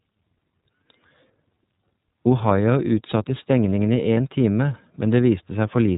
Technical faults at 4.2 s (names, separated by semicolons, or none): iLBC codec; lost iLBC frames